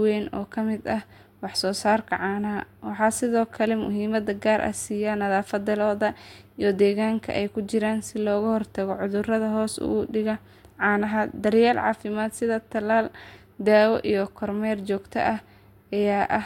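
No technical faults can be heard anywhere in the speech. There is nothing to report at any point in the recording.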